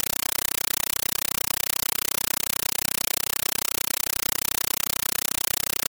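From the start to the end of the speech clip, a compressed stream is played as audio: an AC-3 (Dolby Digital) bitstream reaches the output as if it were ordinary samples and is never decoded. Each coded frame comes out as an 8 ms burst of harsh noise followed by silence, repeating 31.25 times a second. The result is a loud, chattering static that replaces the speech entirely, with burst density that fits a 384 kbps stream.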